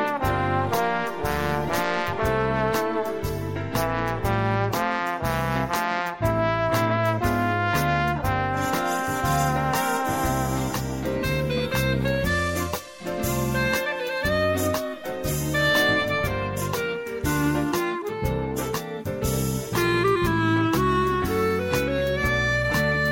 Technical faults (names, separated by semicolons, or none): none